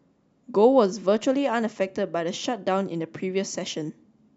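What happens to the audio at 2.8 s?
At 2.81 s a single sharp click cuts through the speech, the sound of dropped samples. Most likely a tiny fraction of a millisecond of the stream went missing, so the waveform leaps from one value straight to a later one instead of moving smoothly between them. Far too little is lost to take away any sound; only the discontinuity is heard. On a spectrogram it appears as one thin vertical line spanning the frequency range, and on the waveform as an abrupt step.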